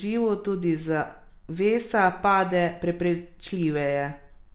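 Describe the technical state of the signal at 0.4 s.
At 0.4 s the speech is intact, carried through ordinary mu-law telephone coding with its usual 4 kHz band limit and no fault present at that moment.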